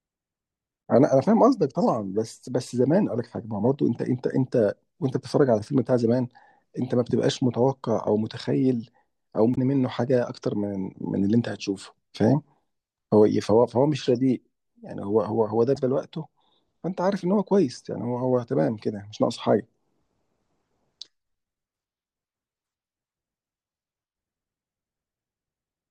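Speech recording with three brief bursts of damaged data in a compressed stream, at 0.81–0.83 s, 9.52–9.58 s and 15.73–15.77 s. Corrupted bytes make the decoder misread those frames and lose sync until it locates the next frame header, producing short chirps or blips.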